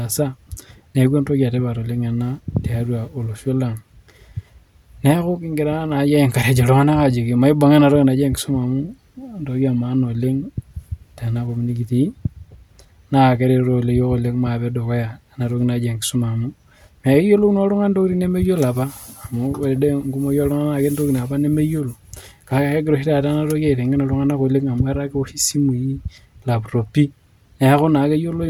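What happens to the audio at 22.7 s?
Nothing goes wrong at 22.7 s; the speech carries on intact through that moment, with no dropout, click, distortion or other fault to be heard.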